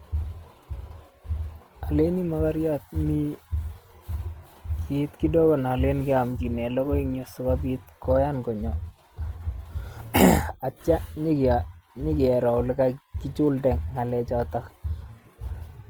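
Opus compression runs throughout the speech, which sounds plainly rough and grainy, its tonal parts turned noisy rather than swirling. The likely cause is the codec's music mode at a rate fitting about 24 kbps, filling starved bands with folded or noise energy. Bandwidth still reaches 20.2 kHz.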